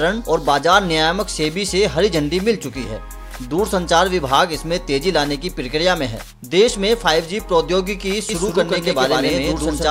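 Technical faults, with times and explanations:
8.29 s to end, doubled audio track: from 8.29 s a second full-band copy of the sound runs roughly 150 ms behind the first at about equal level, giving a hard, slapback-like echo with no decay or room colour. It cuts in abruptly, likely from a second, slower capture path or two out-of-step copies in an edit. On the waveform each transient repeats about 150 ms later at matching height. The spectrogram shows every onset twice, evenly spaced, across all frequencies.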